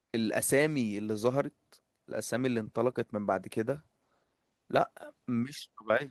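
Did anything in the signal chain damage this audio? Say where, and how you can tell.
No, nothing audible in the signal chain points to damage anywhere along this speech recording.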